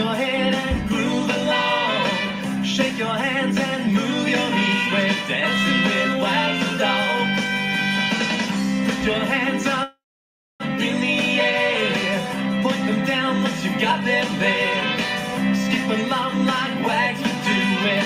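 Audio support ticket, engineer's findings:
Call audio freeze, 9.83–10.62 s: last sound held as fading buzz, then about 0.62 s silence. Likely jitter buffer underrun from delayed packets; playback resumes intact, 0.76 s later.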